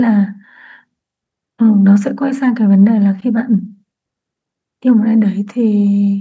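Nothing here counts as a fault; the speech has simply been through a call's microphone processing, which trims away the lowest bass and leaves nothing above 8 kHz, and that's just how such a path normally sounds.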